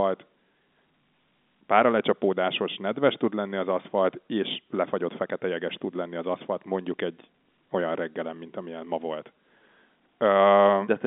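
Telephone-band speech with no technical faults to report.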